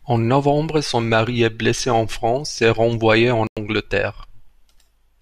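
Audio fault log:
3.47–3.57 s, digital broadcast dropout: the speech just drops out for about a tenth of a second, a clean hole rather than a crackle or a burst of noise, then carries on as if nothing happened. That's the receiver losing the signal or getting frames that failed their checksum, so it mutes until good data returns. Roughly 96 ms of audio is simply gone, which fits a few lost frames, and it isn't coming back.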